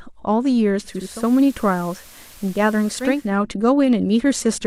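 Speech with a digital radio blending to analogue fault: at 0.83 s the receiver cross-fades over about 0.45 s to the FM signal, adding hiss roughly 25 dB below the speech and dropping level about 1 dB, then blends back to digital at 3.38 s.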